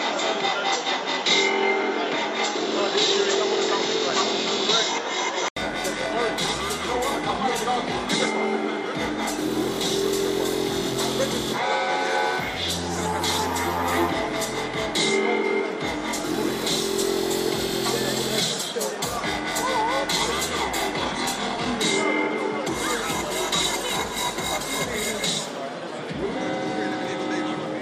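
From 0.00 to 5.56 s the sound is dull and boxy. Nothing reaches above 7.5 kHz. The level differs by about 5 dB, over faint noise roughly 50 dB down. An 80 ms gap at 5.56 s precedes fuller sound. The likely cause is an input switched to a poorer device.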